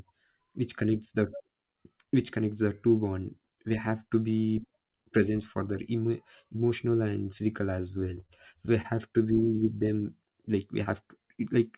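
Speech, heard through a call path with nothing above 4 kHz, which fits narrowband G.711 mu-law at 64 kbps. Short concealed packet loss occurs at 8.20, 8.82 and 10.83 s, the last just after "like we". Each time, about 20 ms of audio failed to reach the decoder. The receiver continued the previous sound for 18 to 26 ms, then blended back, leaving a brief smear or wobble. Short stalls from late packets occur at 8.26, 9.40 and 9.56 s. The jitter buffer ran empty. The receiver held the current sound for 26, 18 and 19 ms until the packet arrived. Nothing is lost, but a sound drags slightly.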